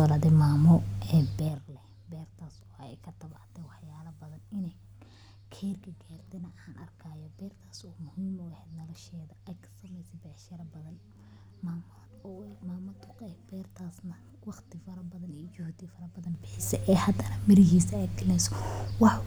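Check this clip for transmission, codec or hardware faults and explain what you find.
Zipper noise occurs twice in this speech. From 1.3 to 1.67 s, just after "mamo e", the level drops by roughly 20 dB in 5 dB steps at about ten per second. From 16.16 to 16.72 s, it rises by roughly 20 dB in 3 dB steps just before "e hadana mirihisa". Because the gain jumps unsmoothed, each step produces a small click, and together they form an audible ticking.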